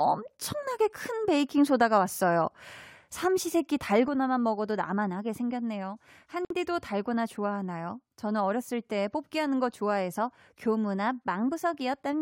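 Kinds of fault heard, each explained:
One channel drops out: From 4.08 s to the end, the level steps down by about 6 dB, likely one stereo channel lost before mono summing; the waveform shows an abrupt, sustained amplitude drop.
Gap at a join of encoded pieces: At 6.45 s, a 54 ms silence cuts into the speech where separately encoded pieces meet, matching a 10 s piece length; the spectrogram shows a blank vertical strip with slightly smeared edges.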